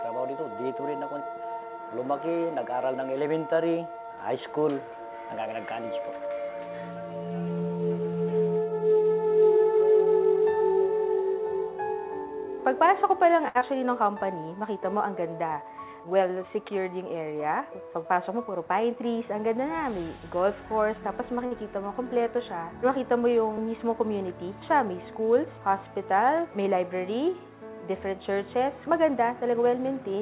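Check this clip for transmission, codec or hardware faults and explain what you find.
Three kinds of network fault appear, all from packet timing, heard through a narrowband call codec with nothing above 4 kHz, which fits G.711 mu-law.

Short stall from a late packet, at 13.48 to 13.57 s and 21.46 to 21.53 s. The jitter buffer ran dry. The last sound was held for 70 ms and then 52 ms, with a slight buzz or dip.

Short concealed packet loss, at 13.59 to 13.63 s. About 40 ms never arrived. The receiver extended the preceding sound, leaving a brief smear or wobble.

Jitter buffer speed-up, at 15.56 to 16.23 s. Excess buffered audio was trimmed by cutting roughly 70 ms of pitch periods. The sound runs about 10% fast at unchanged pitch.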